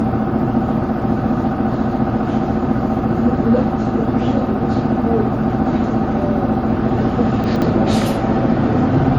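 Throughout the clip the sound is swirly and hollow, with smeared transients and blurred attacks, and nothing is present above 16.6 kHz. The likely cause is generation loss: the audio appears to have passed through an MP3 encoder about three times at roughly 60 kbit/s. Each re-encode quantises on a shifted frame grid, so noise and spectral holes accumulate beyond what a single pass at that bitrate would produce.

From 7.44 to 7.62 s the audio briefly jumbles. This is chunks out of order: a 60 ms chunk was delivered two chunks late and plays after the two chunks that should have followed it. No audio is lost, but the sequence is scrambled over that stretch, and there are three hard splices where the reordered chunks are joined.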